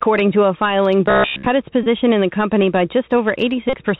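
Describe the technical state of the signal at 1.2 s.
Robotic sound from repeated short buffers runs from 1.06 to 1.46 s, starting just after "to a filing", so 1.2 s falls inside it. New audio seems to be arriving too seldom, and the gaps are filled by looping a sliver of what was just played. The buzz sits at about 67 Hz, which means a slice roughly 15 ms long is being repeated. Most of the real sound through this stretch is lost, and what remains is a stiff, metallic drone that only loosely tracks the speech.

The Bluetooth CVSD headset codec is also present here, as it is across the whole clip. This narrowband link encodes each sample as a single up-or-down bit with an adaptive step size, which fits a 64 kbps CVSD stream. Nothing above 4 kHz comes through. The damage is plainly audible: loud, bright sounds overrun the step and distort, sibilants turn scratchy, and a grainy hiss lies beneath everything, including the robotic passage.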